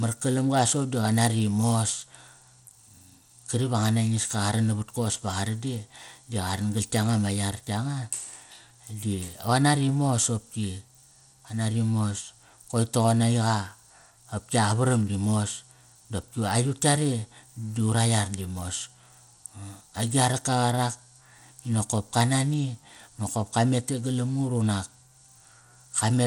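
Throughout the speech, a plainly audible gritty, coarse texture rides on the sound, with nothing above 19.5 kHz. This is likely Bluetooth SBC compression at a low bitrate, suggesting about 96 kbps, where few bits spread across wide sub-bands leave everything crudely quantised.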